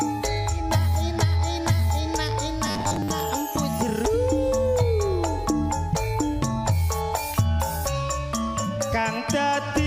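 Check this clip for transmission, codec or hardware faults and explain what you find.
One fault shows up: robotic sound from repeated short buffers, between 2.66 and 3.10 s. For that stretch the audio turns into a rigid, metallic buzz near 100 Hz, which points to a roughly 10 ms chunk being replayed over and over, with about half the stretch made of repeats. This is likely buffer underrun: new data arrived too slowly, and playback filled the gaps with stale audio. A spectrogram shows evenly spaced harmonic stripes at 100 Hz multiples, and the waveform shows identical 10 ms cycles repeating.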